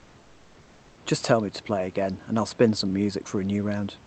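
From 0.00 to 0.97 s the call's discontinuous transmission has likely stopped sending audio during the pause, so the receiver plays comfort noise in place of the background. The room's textured background noise becomes a flat, featureless wash, about 2 dB quieter, until speech begins.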